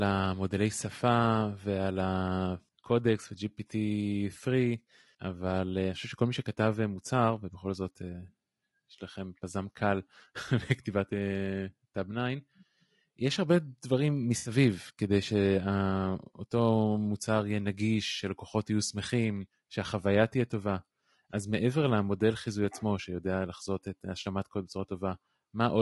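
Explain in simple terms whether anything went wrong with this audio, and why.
The speech sounds rough and grainy throughout, with a dull, artificial top end. This is likely low-delay AAC compression, a codec used for video calls, squeezed too hard.

From 14.37 to 14.51 s there is AAC frame loss with concealment. About 80 ms of audio went missing, and the decoder patched the gap with a smeared, noisy guess.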